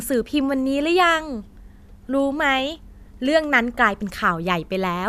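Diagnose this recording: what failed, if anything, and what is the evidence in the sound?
No failure at any stage: the speech shows no dropouts, clicks, distortion, level jumps or band-limiting anywhere in the recording.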